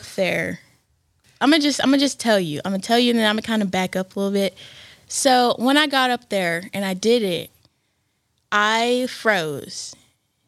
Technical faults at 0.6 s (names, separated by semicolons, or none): none